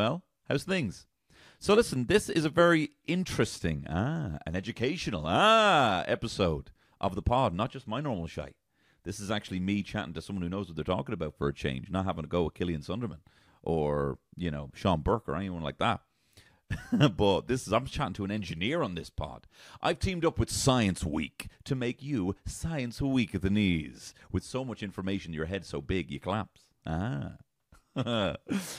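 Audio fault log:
No fault is heard anywhere in the speech.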